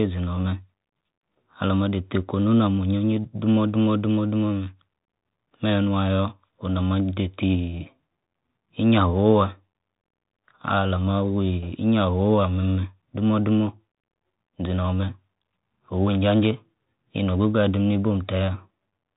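From start to finish the speech carries the sound of a Bluetooth CVSD headset codec. The codec sends one bit per sample, only saying up or down, and its step size adapts as it goes. Nothing above about 3.8 kHz survives, so the speech sounds narrow and boxed in. The damage is plainly audible. S sounds turn scratchy. Loud, quick rises outrun the step and distort. A granular hiss sits under the speech throughout.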